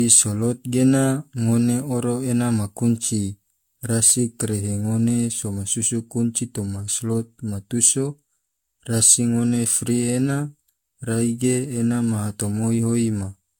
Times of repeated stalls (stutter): none

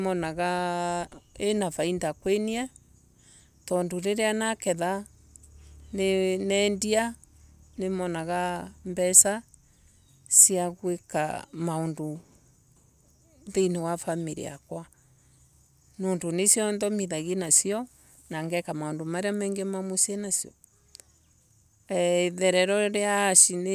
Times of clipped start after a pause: none

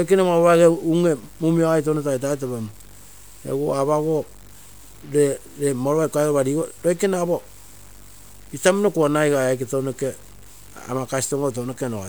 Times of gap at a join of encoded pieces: none

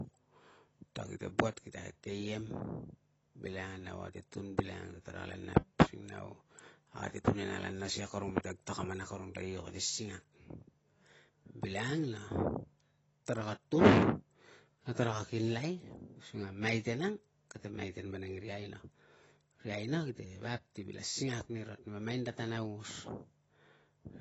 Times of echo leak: none

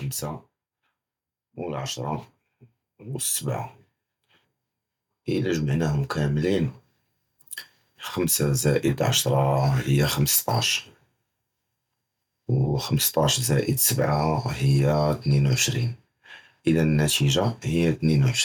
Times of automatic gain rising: 1.53-8.79

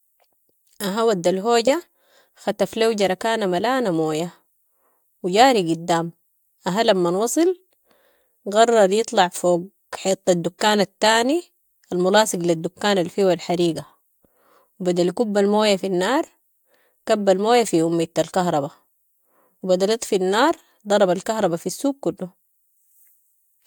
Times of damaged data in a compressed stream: none

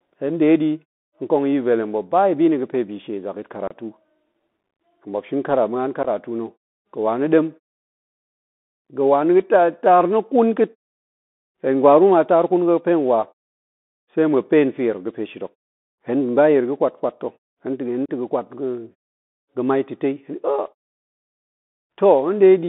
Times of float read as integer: none

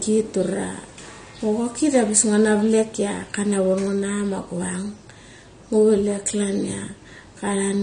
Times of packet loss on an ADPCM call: none

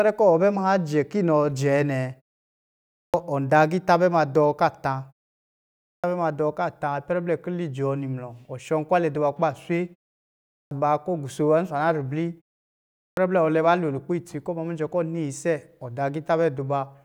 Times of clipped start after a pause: 2.70-3.14, 5.58-6.04, 10.27-10.71, 12.76-13.17

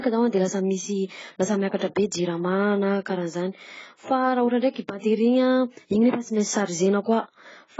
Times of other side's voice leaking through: none

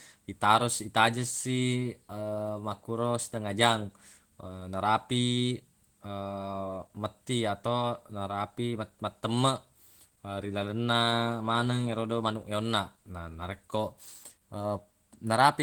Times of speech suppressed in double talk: none

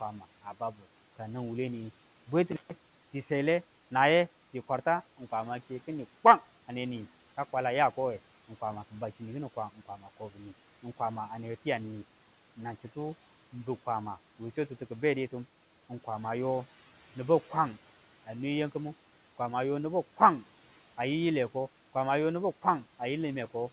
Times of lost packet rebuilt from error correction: none

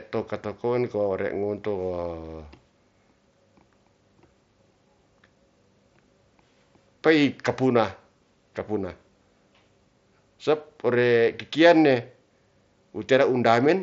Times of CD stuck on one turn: none

